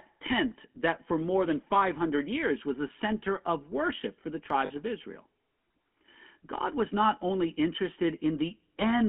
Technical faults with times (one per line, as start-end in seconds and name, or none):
0.00-9.09 GSM full-rate codec
4.66-4.72 lost GSM frames